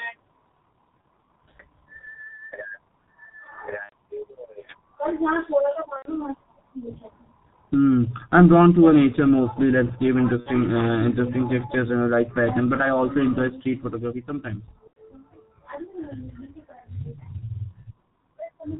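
Throughout, the speech carries heavy G.723.1 codec damage: muffled, hoarse, consonants smeared, consistent with a rate near 6 kbit/s. A spectrogram shows an empty band above 4 kHz. VoIP packet loss concealed by the speech codec hits at 1.01 s, 3.83–3.93, 5.96–6.12, 10.40–10.50 and 14.87–14.98 s. The decoder stretches its last pitch and filter into a fading buzzy tone or coloured noise, with a decaying waveform envelope.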